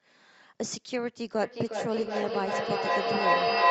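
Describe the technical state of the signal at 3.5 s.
At 3.5 s the sound is caught in feedback echo between two devices, running from 1.42 s to the end. A second device replays this microphone's signal, which is picked up again, returning roughly every 0.4 s. Unlike room reverberation or a single echo, the ringing repeats build, reaching about 8 dB above the speech.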